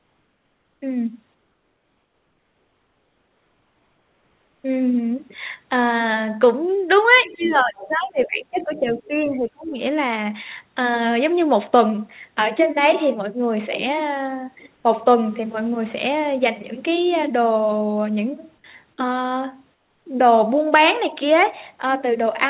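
From 0.00 to 0.82 s and 1.34 to 4.64 s, comfort noise replaces the background: a steady, featureless hiss about 4 dB quieter, likely from discontinuous transmission filling pauses with synthetic noise. Between 7.16 and 9.0 s the other side's voice leaks through in faint scraps at 7.16 to 7.53 s, 7.78 to 7.88 s and 8.61 to 9.0 s, well below the main speech. The echo canceller likely left residue of the loudspeaker signal. Overlapping this, from 7.2 to 9.72 s, speech is suppressed in double talk, dipping by up to around 20 dB, likely while both sides talk at once. The same comfort noise returns briefly at 14.76 to 14.84 s, about 3 dB down, and at 19.74 to 20.06 s, about 5 dB down. Throughout, the call path's codec leaves nothing above 4 kHz.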